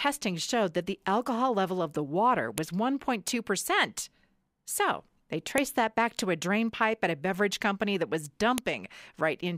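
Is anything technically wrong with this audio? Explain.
Yes. File header played as audio: sharp clicks at 2.58 s after "level of the water", 5.58 s before "that back to a", and 8.58 s after "beverage company that was". These fall every 3.0 s, where separate WAV pieces were joined with their header bytes left in and played as samples.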